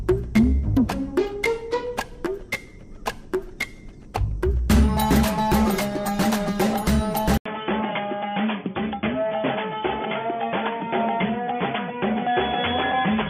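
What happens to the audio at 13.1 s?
At 13.1 s the audio is still on the poorer input it moved to at 7.38 s, a change that likely comes from the input switching to a poorer device, such as a headset's call profile, and that lasts to the end. After a brief 80 ms gap at the switch, nothing passes above 3.4 kHz, so the sound stays dull and boxy. The level sits roughly 5 dB lower, and a faint new background noise runs far beneath the signal.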